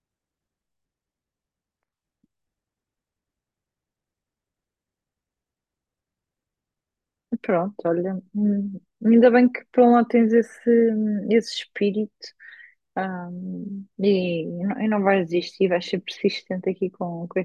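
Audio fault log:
No faults heard in this clip.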